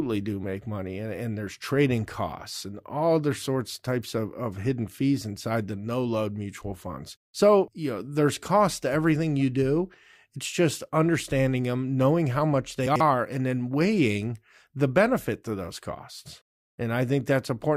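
A speech clip with one brief scrambled moment: from 12.86 to 13.00 s the audio jumbles. These are chunks out of order. A chunk of about 46 ms arrived late and plays two chunks after its proper place. Nothing is missing, but the misplaced segment leaves three hard joins where the waveform jumps, giving the garble.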